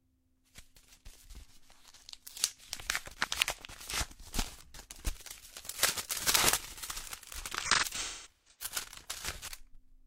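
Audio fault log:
3.24–3.48 s and 9.24–9.48 s, chunks out of order: a brief jumbled stutter. A 60 ms chunk arrived three chunks late and played after the ones meant to follow it. Nothing is missing, but the reshuffled order leaves three hard joins.
7.61–8.74 s, AAC frame loss with concealment: smeared, noisy, phasey patches over about 0.94 s. About 0.6 s of audio is gone, in scattered gaps, which fits roughly fourteen lost frames. The decoder fills each gap from the last good spectrum, and its longest run is about a fifth of a second.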